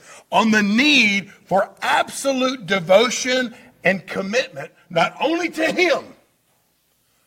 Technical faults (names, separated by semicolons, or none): channel delay (comb filtering)